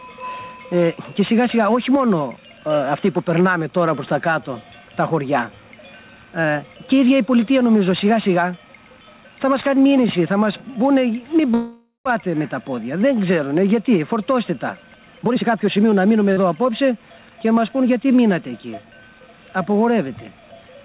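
From 11.54 to 12.07 s the sound stalls: the last moment carries on as a fading buzz for about half a second, with roughly 150 ms of silence, then resumes exactly where it left off. This call audio freeze likely comes from delayed packets draining the jitter buffer, inserting a 514 ms gap without losing anything.

Between 15.19 and 16.15 s the audio turns hurried, running at about 131% speed while the pitch stays put. This jitter buffer speed-up is the receiver shedding its backlog, trimming out short pitch-period slices, around 300 ms in all, to bring the delay back down.

At 16.33 to 16.38 s a brief smear appears where 40 ms of audio never arrived in time. This short concealed packet loss was patched with 37 ms of continued sound before blending back into the real signal. Through the whole clip the sound stops at 4 kHz, which fits narrowband G.711 call coding.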